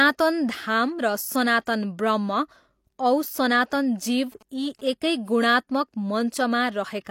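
From 4.17 to 4.90 s, GSM signalling bursts from a nearby 2G phone get rectified by the audio circuit, giving galloping dit-dit-dit groups of 217 Hz buzz around 30 dB below the speech. At 4.49 s, pre-echo appears: the codec spreads quantisation noise across its block, so a 17 ms hiss precedes a sharp attack and softens it.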